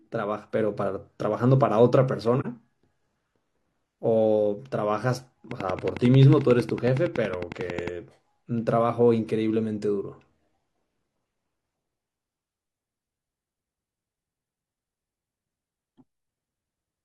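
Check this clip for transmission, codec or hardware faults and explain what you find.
Two faults stand out in this speech clip, one from the codec and one from the hardware or its surroundings.

From 2.40 to 2.45 s there is AAC frame loss with muting. About 43 ms of audio, consistent with a single lost frame, never reached the decoder, which replaced that frame's spectrum with silence. The overlapping transform windows taper the sound down and back up, so it is heard as a brief, soft-edged dropout. On a waveform it is a short gap with smoothly ramped edges. On a spectrogram it is a narrow vertical band empty across all frequencies.

From 5.51 to 7.89 s a train of clicks runs over the speech: around thirty sharp, near-identical ticks at a steady 11 per second, peaking roughly 10 dB above the surrounding signal and audible in pauses as well. The regular repetition points to a likely cause in electrical interference from nearby equipment or a faulty connection or power supply. 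A waveform shows evenly spaced thin spikes standing clear of the speech envelope. A spectrogram shows a comb of full-height vertical lines at equal spacing.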